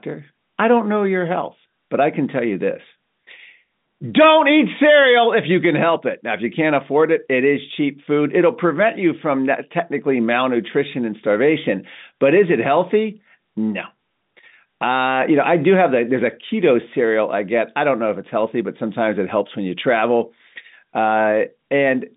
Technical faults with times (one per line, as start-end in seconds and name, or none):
none